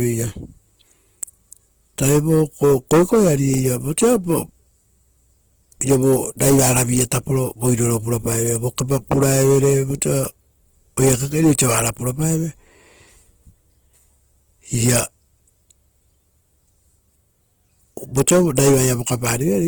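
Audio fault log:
throughout: Opus compression. Likely cause: an Opus encoder in CELT mode short of bits, refilling bands with folded or noise content at a rate fitting about 16 kbps. The speech turns audibly rough and grainy, though content reaches about 20.1 kHz.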